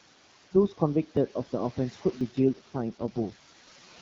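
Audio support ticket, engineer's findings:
Noise suppressor artifacts, whole clip: background level pumps, dropping about 10 dB in pauses and rising back under speech. Residual room noise, about 18 dB below speech. Suppressor applying per-frame band gains to noise-classified bins.

Small forward jumps at 1.17 s and 2.21 s, no silence, each skipping a slice of roughly 10 ms. Likely dropped buffer (overrun): capture not read in time, hardware overwrote samples, and the surviving audio is spliced end to end.

AMR rate drop from 2.11 s to end: speech goes rougher, more synthetic, with bandwidth and continuity unchanged. AMR-WB stepped down from 12.65 to 6.6 kbit/s, typically a network command on weak radio, spending bits on error protection. Before 2.11 s, 12.65 kbit/s coding sounds clear.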